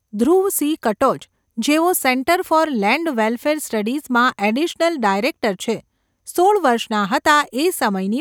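Nothing stood out on listening to this speech recording.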